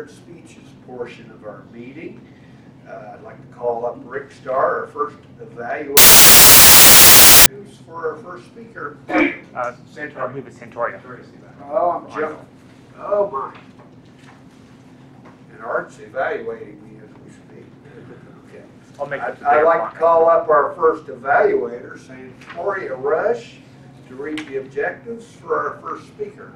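At 5.97 s the audio collapses into loud, harsh broadband noise until 7.46 s: samples built from the wrong bytes. The reader assembled each sample's bytes wrongly, so the jittery low bits ended up as the big part of every value, swamping the actual sound.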